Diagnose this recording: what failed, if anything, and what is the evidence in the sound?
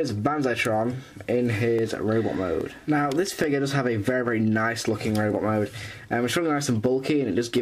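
A short, regular click recurs about every 0.83 s from roughly 0.13 s to 7.58 s, about ten in all, each a small discontinuity in the waveform rather than a gap. The cause is likely clock drift buffer slips at the driver or buffer stage. Two devices run on independent clocks roughly 400 ppm apart, so the buffer between them creeps until a block of around 15 samples is dropped or repeated, then resets and drifts again.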